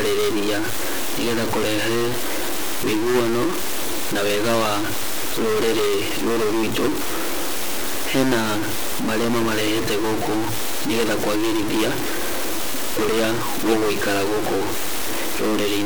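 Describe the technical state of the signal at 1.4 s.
At 1.4 s, as everywhere, harsh buzz marks a stuck bit, likely one high bit frozen, a step near -20 dBFS. Unlike clipping, it fills pauses with noise too.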